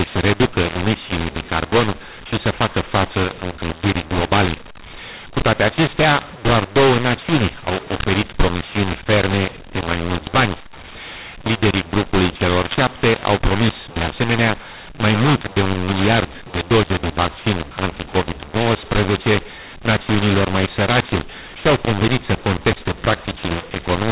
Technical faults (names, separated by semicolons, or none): mu-law and A-law mixed up